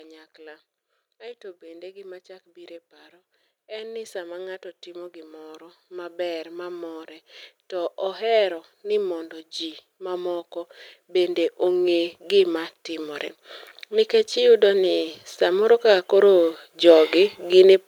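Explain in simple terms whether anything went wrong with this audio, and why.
Automatic gain rising, from 3.68 to 7.15 seconds and again from 13.89 to 17.44 seconds: the recorder judged the speech too quiet and slowly turned itself up, so voice and background swell together.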